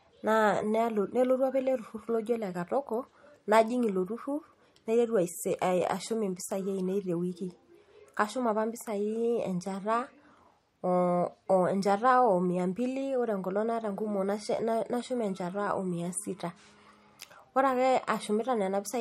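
From start to finish the speech has a watery, swirling quality, with a metallic edge on the hiss of sibilants, and nothing reaches above about 15.9 kHz. The likely cause is MP3 compression at a low bitrate, which fits roughly 48 kbps. Short of bits, the encoder cuts the treble at a fixed point and drops quieter frequency components, which flicker in and out from one frame to the next, producing the plainly audible churning texture.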